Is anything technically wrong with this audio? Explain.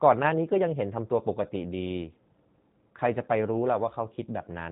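Yes. G.729 codec coding runs throughout the speech, and the damage is plainly audible. The codec reduces each 10 ms frame to a vocal tract filter, a pitch predictor and a handful of pulses, a sparse rebuild that fits an 8 kbit/s stream. Everything above 4 kHz is gone, so consonants lose their edge and the speech sounds narrow, slightly rough and synthetic, with a buzzy, artificial texture replacing natural detail.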